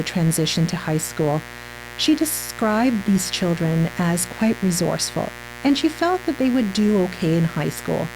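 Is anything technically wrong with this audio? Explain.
Yes. Mains buzz runs through the whole speech clip. A dimmer, rectifier or gap in shielding is letting sharp switching spikes from the 60 Hz supply into the signal, stacking harmonics into the kilohertz range. The result is a steady, raspy buzz sitting roughly 15 dB below the speech.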